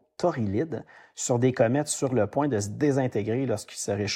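No technical faults occur at any point in the clip, so there are none to describe in time order.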